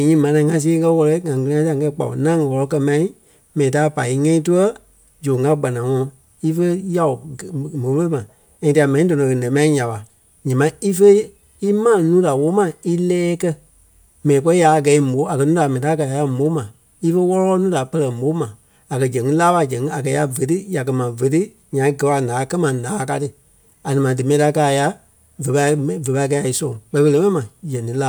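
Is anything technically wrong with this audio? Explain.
No, nothing technically wrong can be heard in this speech recording. Nothing in the sound points to any problem in how it was captured or carried.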